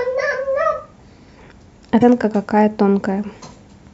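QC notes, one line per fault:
2.00–2.03 s, broken MP3 bit reservoir: the speech jumps forward with a brief glitch, about one 26.1 ms frame long. Likely cause is missing frames, so the next frame reached back for borrowed reservoir bytes and decoded another frame's data instead.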